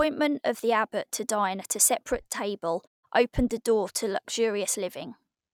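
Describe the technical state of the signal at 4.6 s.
At 4.6 s the speech signal is intact, with no fault present at that moment.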